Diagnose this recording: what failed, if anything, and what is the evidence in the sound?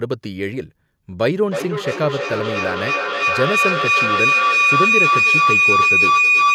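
A feedback howl sets in at 1.26 s and runs to the end of the speech clip. It peaks about 6 dB above the speech, near 3 kHz, with a loop delay of roughly 300 ms. This points to two call devices in one room re-amplifying each other's loudspeaker output.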